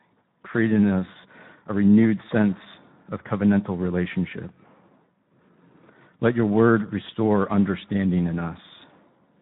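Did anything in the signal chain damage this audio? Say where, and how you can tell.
Yes. Speex codec damage runs through the whole speech clip, so the harm happened at the codec stage. The speech sounds plainly noisy and hoarse, with a rough texture in place of natural detail, which points to Speex at a low rate of around 11 kbps. This CELP coder models the vocal tract well but has too few bits to describe the excitation signal that drives it. That coarse excitation is what makes the speech sound rasping throughout.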